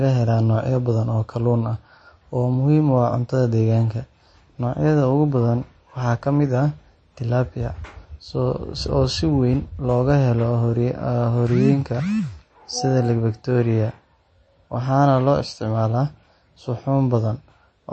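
From start to finish the speech has a hard ceiling: nothing gets through above about 8.3 kHz, so the s sounds come out dull and a bit lispy. The quieter detail also has that watery, swirly texture where faint parts flicker in and out. That's most likely MP3 compression at a low bitrate, which fits something near 33 kbps. The encoder ran short of bits, chopped the treble at a fixed point, and kept dropping weaker frequency lines from frame to frame.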